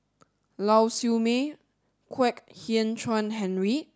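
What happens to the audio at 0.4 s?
Nothing goes wrong at 0.4 s; the speech carries on intact through that moment.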